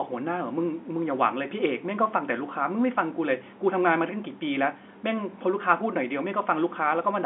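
No technical faults occur anywhere in the speech, so there is nothing to describe in time order.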